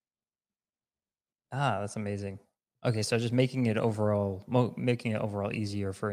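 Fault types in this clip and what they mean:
No technical faults can be heard anywhere in the recording.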